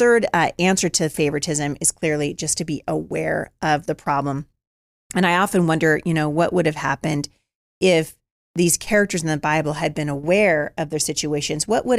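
No dropouts, distortion, timing glitches or other technical problems can be heard anywhere in the recording.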